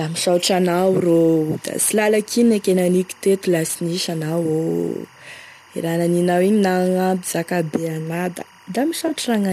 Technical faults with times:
0.00-9.52 timecode bleed
0.00-9.52 sample clock jitter
3.67-3.70 AAC frame loss with concealment
9.07-9.11 AAC frame loss with concealment

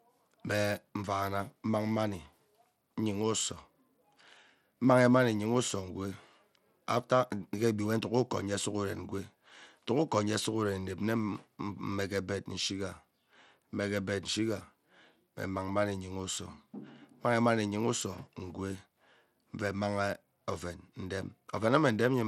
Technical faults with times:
0.00-22.28 Bluetooth SBC compression

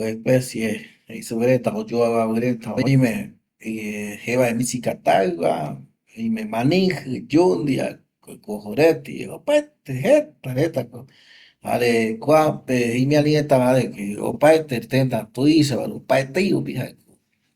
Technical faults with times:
2.77-2.88 frames out of order
14.31-14.37 frames out of order

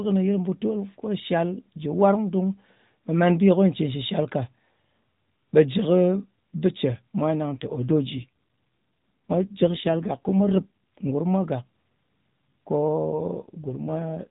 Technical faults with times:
7.52-11.11 AMR rate drop
13.02-14.28 AMR rate drop

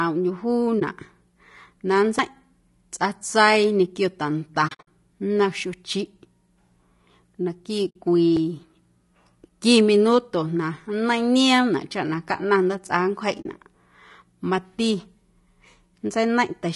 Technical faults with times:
0.00-16.76 low-delay AAC compression
0.79-0.82 AAC frame loss with muting
2.19 CD skip
4.67-4.88 AAC frame loss with muting
7.89-7.96 AAC frame loss with muting
8.36 CD skip
13.41-13.46 AAC frame loss with muting

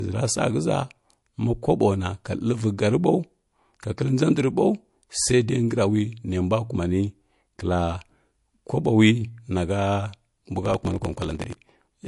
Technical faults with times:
0.00-12.08 low-bitrate audio saved at a high bitrate
10.61-12.08 block size mismatch (truncated)

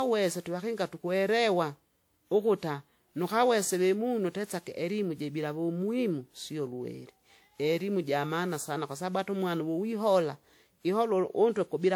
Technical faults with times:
0.00-11.96 generation loss

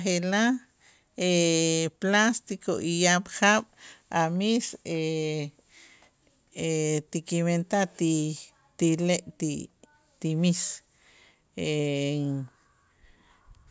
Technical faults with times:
none

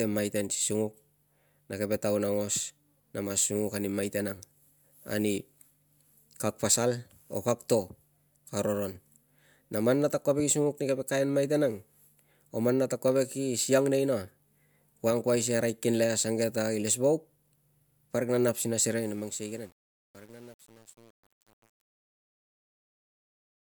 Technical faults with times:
18.88-23.75 truncation distortion on a fade

